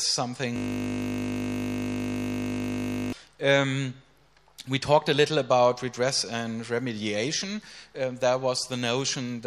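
From 0.56 to 3.13 s, a system hang loop replays one 20 ms buffer, turning the audio into a steady 50 Hz buzz.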